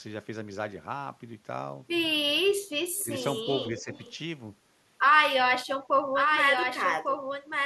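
At 2.37 to 2.74 s the speech sinks hard, by something like 35 dB, in what sounds like speech suppressed in double talk: the echo canceller likely couldn't tell this talker from the far-end echo and ducked everything. Shallower dips of that kind follow at 3.03 to 3.10 s and 3.71 to 3.91 s.

Between them, from 2.95 to 3.43 s and again 3.78 to 4.16 s, there's an echo leak, a faint copy trailing 283 ms behind at about 20 dB down, likely residual loudspeaker pickup the far end's canceller let through.

From 6.15 s to the end a doubled audio track cuts in abruptly: a clean, full-band copy about 5 dB quieter, roughly a second behind, with no room tail, likely from a second, slower capture path.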